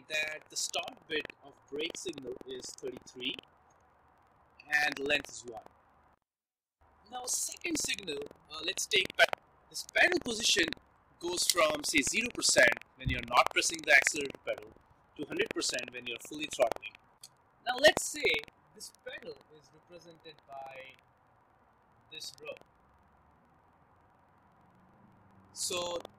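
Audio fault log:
throughout buffer tearing: a 21.5 Hz buzz sits on the sound, which fits a 2048-sample buffer. Each period carries a small slice of audio from about a tenth of a second earlier, hard-joined on both sides. Unlike an underrun, nothing drops out, and silence stays clean.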